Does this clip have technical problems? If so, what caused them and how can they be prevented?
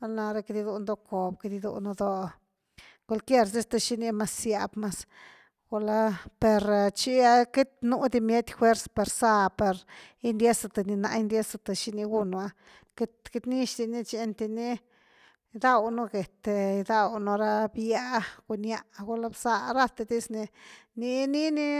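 No, the speech signal shows no technical problems, so there is nothing here that needs preventing.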